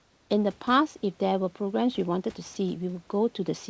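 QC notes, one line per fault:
0.00–0.30 s, comfort noise in place of the background: the opening room background, sitting about 37 dB below the loudest speech, is replaced by a smooth, featureless hiss about 4 dB quieter. This is likely discontinuous transmission, with the receiver synthesising noise during the detected pause.
2.54–2.56 s, sound dropped by the voice detector: a 20 ms sliver of speech vanishes into the same flat noise, leaving a brief gap. The sender's detector likely mistook this quiet moment for background and stopped sending, so synthetic noise filled it.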